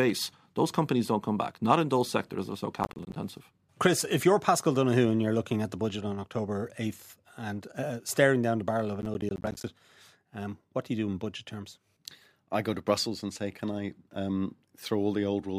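At 2.83 to 3.16 s, and again at 9.02 to 9.64 s just after "the barrel of a", the speech breaks into processor overload crackle. The processor fell behind and missed a run of buffer deadlines, about twenty in each burst, with gaps that suggest buffers of around 10 ms. Each missed buffer drops out to silence with hard edges, so the speech is heard as a gritty tearing that clears once the load eases.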